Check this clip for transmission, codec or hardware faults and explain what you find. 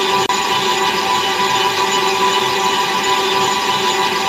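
No fault can be heard in this recording of everyday sound, and the signal comes across as continuous and intact throughout.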